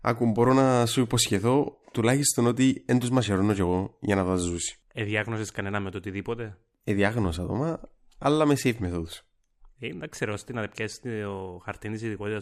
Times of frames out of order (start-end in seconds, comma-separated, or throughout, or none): none